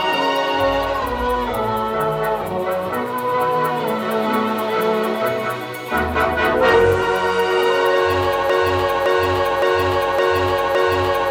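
The playback or stream likely stalled at 8.50 s and kept resending its last buffered fragment. This produces a broken-record loop: a 0.56 s piece of audio repeats exactly, back to back, five times until the clip ends, and the intended sound is lost.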